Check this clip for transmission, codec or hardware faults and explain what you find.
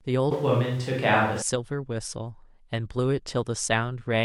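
One fault is present: a switch to a distant microphone. From 0.32 s to 1.42 s the speech turns roomy and hollow and loses bass. Both transitions are abrupt. The level barely changes. Room noise sits roughly 30 dB below the speech. The likely cause is the close microphone dropping out, leaving a farther microphone to carry the room's reflections.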